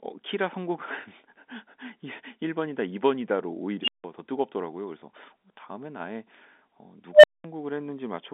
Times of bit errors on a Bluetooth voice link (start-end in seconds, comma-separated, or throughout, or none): none